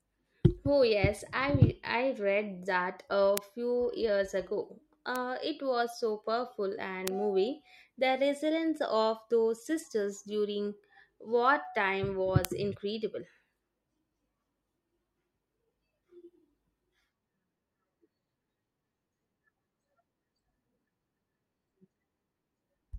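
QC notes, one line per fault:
3.38 s: bit error spike, a single-sample jump to about -1 dBFS that returns at once. One flipped bit throws the sample value out by a power of two, so it lands as one sharp broadband tick with no relation to the speech around it.
5.16 s: bit error spike, between "a few years ago" and "it was so powerful", one sample reaching about -13 dBFS. Being lower in level it is a softer tick, but it is still an isolated flat-spectrum click from a corrupted sample value.
7.08 s: bit error spike, just after "it was so powerful", two adjacent samples peaking near -7 dBFS. The corruption spans two consecutive samples yet remains far too short to carry pitch, so it is heard as a single crisp tick across the spectrum.
12.45 s: bit error spike, right after "those sisters during wartime", one sample hitting about -1 dBFS. This is the loudest kind of flip here, a near-full-scale excursion that snaps back immediately and gives a hard, bright tick unrelated to the speech.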